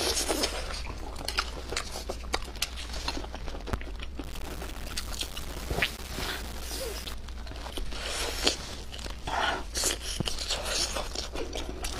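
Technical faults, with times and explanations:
3.73 to 3.76 s and 10.20 to 10.23 s, loud pop: Each is a single sharp pop, about 20 dB and then about 15 dB above the sound, which carries on underneath. A sudden electrical pulse, likely from a switch, plug or static discharge, is added to the signal and briefly shaped by the circuits after it.
4.24 to 7.14 s, low bit depth without dither: The audio turns grainy and harsh, with distortion that follows the sound itself. The error sits only about 10 dB below the signal, which fits roughly 6 bits. This likely comes from rounding the samples to so few steps without dither.
6.43 s and 8.83 s, damaged data in a compressed stream: Each is a brief chirp or blip, under 20 ms long. Part of the compressed data was corrupt at those points. The decoder misread the frames there, lost its place in the stream, and produced a short burst of garbled output.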